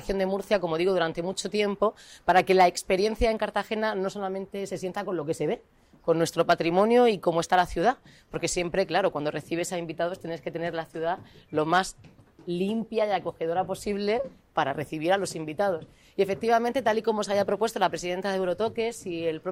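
Hard clipping hits at 2.29–2.66 s, 6.40–6.97 s and 11.73–11.79 s. The peaks overdrive a stage by about 3 to 4 dB and are flattened, adding harsh high harmonics heard as brief crackle.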